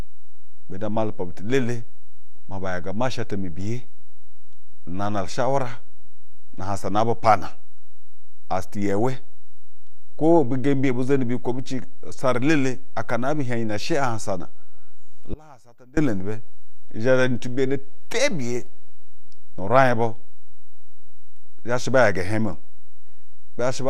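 A constant DC offset sits under the whole of this speech recording: the waveform rides off the zero line by a fixed amount for its entire length. It can't be heard as such, but it eats into the available headroom and appears as a steady component at the very bottom of the spectrum. Separately, the signal feeding the path was likely lost for a moment while everything downstream kept running, giving an audio dropout to a faint residue from 15.34 to 15.97 s. For those 0.63 s the speech cuts out abruptly rather than pausing or fading, leaving only a faint trace of sound about 25 dB below the normal level. Full level returns just before "ule ni".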